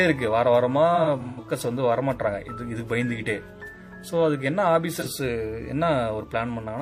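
AAC frame loss with concealment hits at 0.95 to 1.40 s, where roughly 0.21 s of audio, in runs of up to about a tenth of a second, is rebuilt from the last good spectrum, leaving smeared, noisy patches. It recurs briefly at 4.94 to 5.07 s, where about 43 ms is filled in the same way.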